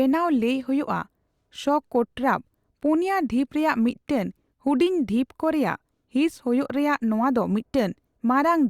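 No technical faults can be heard anywhere in the speech.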